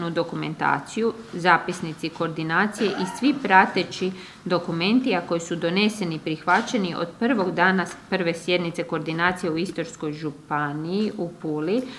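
No technical faults can be heard in this audio.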